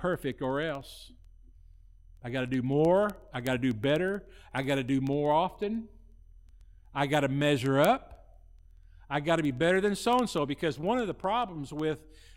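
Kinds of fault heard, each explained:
Word clock ticks: The receiving device runs on its own clock instead of locking to the sender's digital link, and the two rates differ by roughly 400 parts per million. Each time the clocks slip past one another, a single sample is dropped or repeated and its neighbours are misread. In this speech clip that produces sharp ticks about every 0.07 s, some two hundred of them, running from 0.14 s to 12.35 s.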